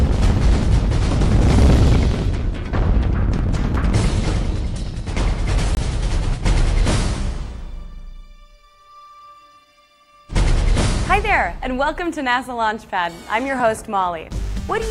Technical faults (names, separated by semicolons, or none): block of digital silence